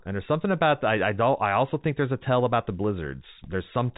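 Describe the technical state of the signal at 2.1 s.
At 2.1 s the speech is intact, with nothing wrong at that point beyond the G.711 telephone coding path running as it should, which keeps the band below about 3.8 kHz.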